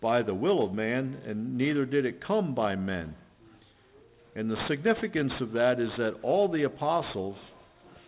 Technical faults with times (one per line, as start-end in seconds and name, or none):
0.00-8.08 aliasing